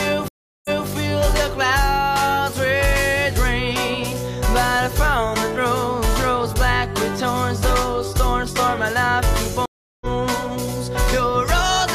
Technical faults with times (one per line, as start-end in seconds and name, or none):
0.28-0.88 stream reconnect
9.66-10.06 stream reconnect